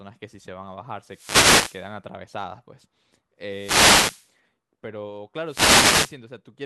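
Wireless microphone noise hits at 1.02 to 1.95 s, 3.45 to 4.34 s and 5.45 to 6.18 s: the analogue FM radio link fades as reflected paths cancel, so receiver noise rises into a swish of static that washes over the speech.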